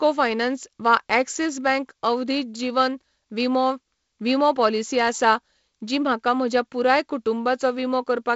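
No technical faults are audible anywhere in this speech.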